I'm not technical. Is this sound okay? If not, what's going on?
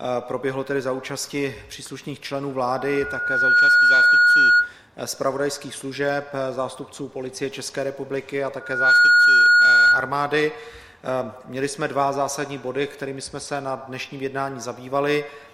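No. Twice the audio is drowned out by loudspeaker feedback squeal. The first runs from 2.71 to 4.74 seconds. It swells over about a second. The second runs from 8.60 to 10.19 seconds and builds much faster. Both are the same steady, high whistle at 1.4 kHz, much louder than the rest of the sound. This happens when a microphone hears its own loudspeaker. The sound loops round and keeps growing at one pitch.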